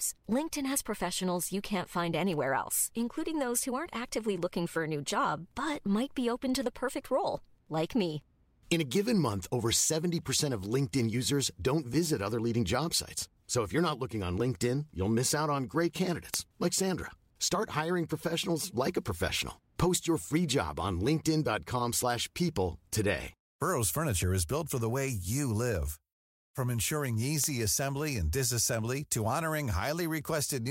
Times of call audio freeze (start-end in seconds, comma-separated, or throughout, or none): none